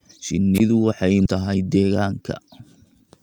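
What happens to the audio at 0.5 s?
At 0.54 s the speech gives way to a brief swell of hiss, then a hole of near silence lasting about 20 ms, and the speech returns by 0.60 s. This is a wireless microphone squelch dropout: the analogue FM radio link faded so far that the receiver's squelch judged the signal unusable and muted its output, and the rising hiss is receiver noise coming up as the carrier weakened, just before the gate closed.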